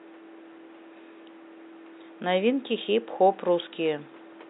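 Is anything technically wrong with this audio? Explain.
No, nothing is technically wrong.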